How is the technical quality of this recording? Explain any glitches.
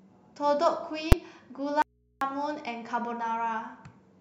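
The recording has two clear glitches in the speech.

At 1.12 s there is a single sharp bang. These are invalid numbers at full scale: a calculation produced infinite or invalid values, which were pinned to maximum level for about 5.8 ms, which fits a 256-sample processing block. That block is so short that its start and end merge into one loud bang.

From 1.82 to 2.21 s the speech cuts out abruptly for about 390 ms, leaving only a low mains hum roughly 40 dB below the voice. This is an audio dropout to a faint residue, likely caused by the incoming signal being lost while the stage after the break stayed live and picked up hum from its open input.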